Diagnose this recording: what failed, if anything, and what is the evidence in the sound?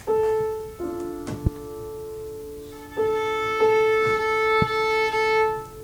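Two loud pops stand out, from 1.47 to 1.49 s and from 4.62 to 4.65 s. Each is a single sharp pulse, about 20 dB and about 15 dB above the signal. The sound continues underneath. The likely cause is a voltage step from a plug, switch, static or driver glitch, shaped by later circuitry.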